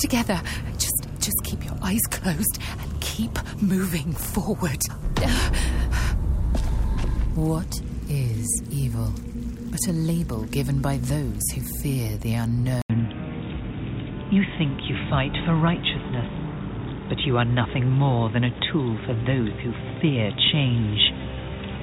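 At 12.82 s the audio drops out for 80 ms, then returns dull and boxy. From there to the end, nothing above 3.8 kHz remains. A new, faint background noise sits far below the signal, about 35 dB down, and the overall level is unchanged. This is likely an input switched to a poorer device.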